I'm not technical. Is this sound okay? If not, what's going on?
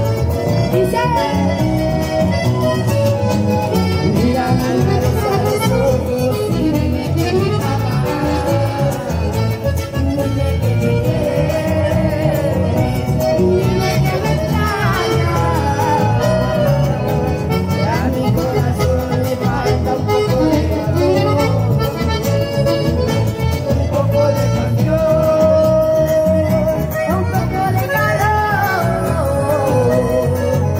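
Yes, nothing here registers as a technical fault at any point in the sound.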